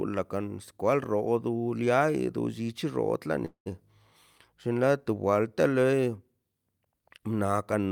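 Speech with a call audio freeze, likely from delayed packets draining the jitter buffer: 3.45 to 3.68 s holds a fading buzz, then silence, before resuming 0.2 s later with nothing lost.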